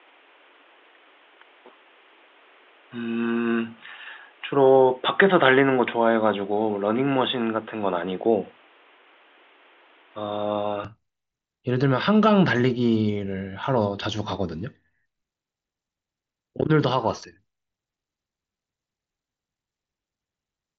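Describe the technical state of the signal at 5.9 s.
At 5.9 s you're in the stretch from the start to 10.85 s where the sound has likely switched to a poorer input device. Everything above 3.8 kHz is gone, so it's dull and boxy. There's a faint new noise floor well under the speech, and the level shifts by about 5 dB at the changeover with no gap. After that the band opens back up to the headset path's 7.7 kHz.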